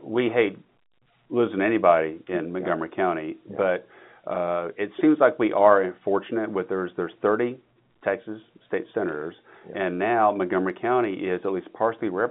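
Nothing here counts as a fault: the speech just sits in the ordinary telephone band of 150 Hz to 3.6 kHz that G.711 A-law coding at 64 kbps gives it, which is exactly how a phone line is supposed to sound.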